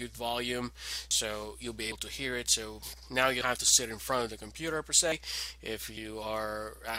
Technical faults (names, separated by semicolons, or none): dropped buffer (overrun)